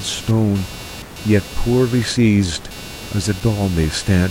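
From start to finish the speech carries computer activity noise, a chirping buzz pulsing at roughly 300 Hz about 20 dB below the speech. Processor or mouse load is disturbing the shared audio ground. A spectrogram shows flickering harmonic lines that ignore the speech.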